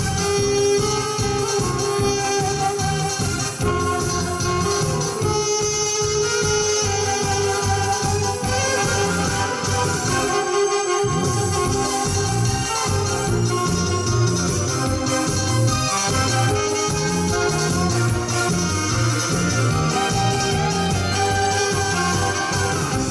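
Nothing stood out as a technical problem anywhere in the recording on listening.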